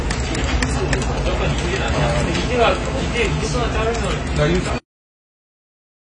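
AAC compression runs through the whole clip: nothing is present above 9.5 kHz, and the everyday sounds come across dull and smeared, with a warbling, fizzy grain on sustained sounds. This is likely AAC-LC at a low bitrate, around 24 kbps, which quantises the spectrum coarsely and lowers the cut-off.

GSM signalling bursts appear from 0.79 to 1.75 s. They form a galloping dit-dit-dit of short 217 Hz buzzes, roughly 10 dB below the sound. A nearby 2G phone exchanging signalling sends grouped radio bursts, and the audio circuitry rectifies them into audible pulses.

GSM phone buzz follows from 1.94 to 3.48 s. It is a hard, raspy, harmonic-rich buzz at 217 Hz, about 14 dB below the sound and unrelated to it. A phone in a call transmits bursts 217 times a second, and the audio circuitry demodulates them into this steady tone.

A cut-off end occurs at 4.78 s. The audio stops abruptly mid-sound and drops straight to digital silence for the rest of the clip, with no natural decay. 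The final buffers were never written or played out, so the sound simply ends.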